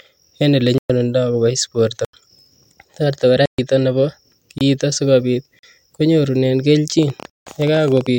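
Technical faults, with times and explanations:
0.78–0.90, 2.05–2.13, 3.46–3.58, 4.58–4.61, 5.59–5.63, 7.30–7.47 s, blocks of digital silence: 24 to 171 ms holes with hard cut-out and cut-in, fitting underrun-length buffers, heard as dropouts rather than isolated ticks.
7.03–8.08 s, train of clicks: about twenty similar pulses, roughly 16 per second at uneven spacing and near signal level, likely from interference, ticking over the sound.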